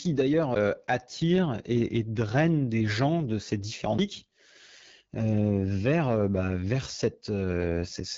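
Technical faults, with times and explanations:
Throughout, AMR wideband (HD Voice) codec: the speech sounds rough and raspy. This fits the 8.85 kbit/s mode, which starves the pulse-driven model. Nothing is heard above 7.5 kHz.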